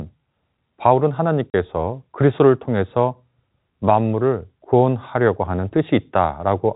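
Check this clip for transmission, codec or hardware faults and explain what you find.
One transmission fault stands out: a short dropout from packet loss filled with silence. The speech runs through telephone-style G.711 coding, which cuts everything above 4 kHz.

At 1.50 to 1.54 s, 40 ms of audio goes missing, which fits two lost 20 ms packets. The receiver substituted digital silence, so the sound stops abruptly with hard edges. The waveform shows a flat gap, and the spectrogram shows a blank vertical stripe.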